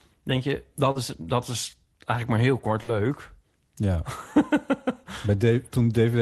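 At about 0.91 s, right after "denk je" and before "is dat", there is a short concealed packet loss. Roughly 40 ms of audio never arrived in time, and the receiver filled about 37 ms by extending the preceding sound before cross-fading back into the real signal at 0.97 s. It comes across as a brief smear or wobble rather than a gap. The smooth return marks it as a single short loss, not a burst.

At about 2.83 s, just after "eigenlijk maar heel kort", a burst of packet loss follows. Here the decoder ran out of incoming audio for longer, padding about 45 ms by holding the last sound and fading it down. That gives a held buzz or dying hiss that ends at 2.90 s, where the audio picks up further along with about 40 ms skipped. The audible jump forward and the decaying fill set it apart from the earlier smear. Both events sit inside the Opus call path, whose band limit points to about 12 kHz.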